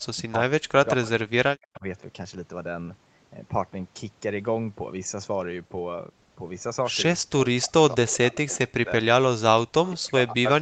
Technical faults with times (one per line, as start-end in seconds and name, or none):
0.00-1.84 speech suppressed in double talk
1.06-1.10 echo leak
1.74-1.79 echo leak
7.18-10.61 speech suppressed in double talk
7.92-8.13 echo leak
9.86-9.90 echo leak